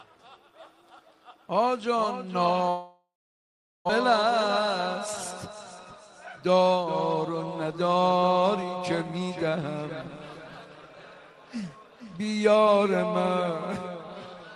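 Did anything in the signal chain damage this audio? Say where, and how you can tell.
Yes. At 2.69 s the sound stops arriving and the receiver stretches the last of it into a fading buzz or hiss, then holds about 760 ms of silence before audio resumes at 3.91 s. About a second of material never comes back, which points to a long network dropout as the likely cause, with concealment covering the hole.

After that, the jitter buffer runs a speed-up twice: 4.09 to 4.68 s at 107% speed, trimming around 50 ms, and 7.29 to 8.24 s at 106%, trimming around 70 ms. Short pitch-period slices are cut repeatedly, so the audio sounds hurried while its pitch stays put.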